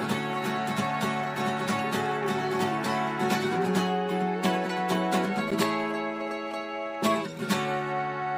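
At 5.51 s, a gap between stream segments: mismatched segment timestamps leave a hole of about 11 ms, played as silence with hard edges cutting the sound.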